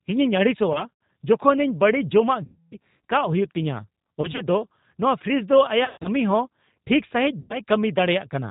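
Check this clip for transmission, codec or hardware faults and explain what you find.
Two faults are present: codec damage across the whole clip, and five separate dropouts that the decoder has patched over.

G.729 codec, throughout: the speech is rebuilt at 8 kbit/s from a vocal tract model, a pitch predictor and a few pulses per frame, with nothing above 4 kHz. The result is band-limited, rough and plainly synthetic.

VoIP packet loss concealed by the speech codec, at 0.73–0.85, 2.44–2.76, 4.22–4.43, 5.85–6.09 and 7.40–7.59 s: the decoder stretches its last pitch and filter while lowering the gain. Each gap, the longest about 280 ms at 2.44 s, turns into a buzzy tone or coloured noise that fades, and the speech stays weak or distorted briefly afterward.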